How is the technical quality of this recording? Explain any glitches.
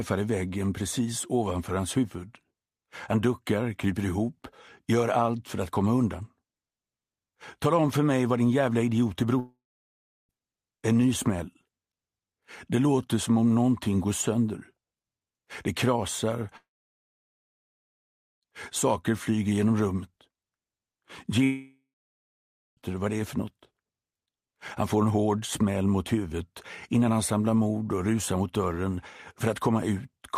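Three gaps break up the audio, at 9.39 to 10.31 s, 16.57 to 18.44 s and 21.44 to 22.83 s, each likely a long network dropout. The last sound smears into a fading buzz, then goes silent for about 0.7, 1.8 and 1 s, and the audio resumes further on with that stretch simply missing.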